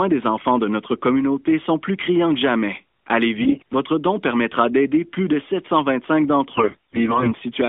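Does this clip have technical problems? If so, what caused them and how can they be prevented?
Yes. AMR bit errors: on a weak radio link, the less protected bits of the mobile codec frames arrived corrupted while the core checksum still passed. The decoder then rebuilt the speech from misplaced excitation pulses and wrong pitch, gain and spectral detail. From 3.42 to 3.74 s, just before "don permettra d'aider plus", and again from 6.54 to 7.32 s, the speech keeps roughly its pitch and level but turns hoarse, scratchy and gargly. A stronger link or more robust channel coding, such as a lower AMR mode with more error protection, would prevent it.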